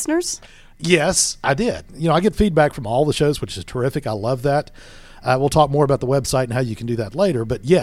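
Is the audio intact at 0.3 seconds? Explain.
Yes, at 0.3 seconds the speech plays through cleanly, with no dropout, glitch or other fault to be heard at that point.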